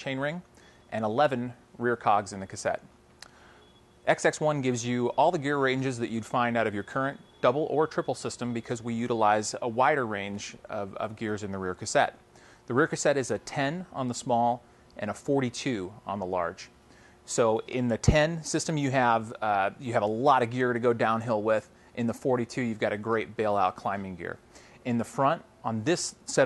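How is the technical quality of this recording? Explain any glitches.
No technical faults can be heard in this recording; the signal runs continuously with no interruptions, dropouts or processing errors.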